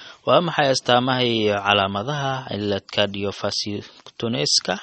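Running through the whole speech clip is damage that points to MP3 compression at a starved bitrate, likely around 32 kbps. Short of bits, the encoder has discarded everything above 8.4 kHz and dropped weak frequency lines that then flicker in and out between frames. The result is plainly audible: dull, band-limited speech with a watery, swirling texture, metallic chirping on s sounds, and consonant attacks that smear rather than snap.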